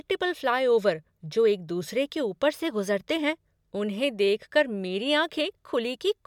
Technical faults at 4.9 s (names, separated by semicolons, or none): none